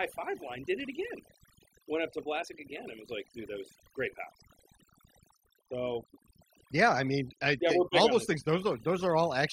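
Speech, and the whole clip has overdone noise removal: the noise reduction was pushed far too hard, so bands near its noise estimate get switched off along with the softer parts of the voice. The gaps go to near silence with twinkly specks.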